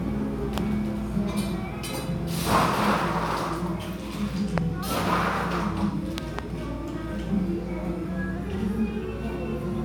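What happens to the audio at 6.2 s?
A sudden voltage step, likely from a plug, switch, static discharge or driver glitch, was added to the signal between 6.18 and 6.41 s, producing a loud pop. The circuits downstream shaped that pulse, and the listener hears a pair of pops in quick succession, peaking about 20 dB above the surrounding level. The underlying sound continues beneath them without interruption.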